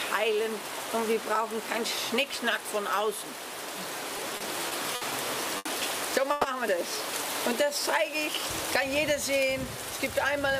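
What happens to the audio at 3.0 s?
At 3.0 s the audio plays through intact, with no dropout, click or distortion at that moment.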